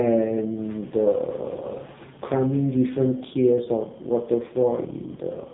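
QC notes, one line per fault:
Throughout: AMR narrowband mobile codec. The speech sounds like an old phone call, squeezed into a band with nothing above roughly 3.8 kHz, so all the air and sibilant sparkle is gone. On top of that the damage is heavy: a buzzy, synthetic edge on the voice, which fits the codec running near its lowest bitrate, about 5.15 kbps. At that rate the vocal-tract model is fed so few pulses per frame that the result turns robotic.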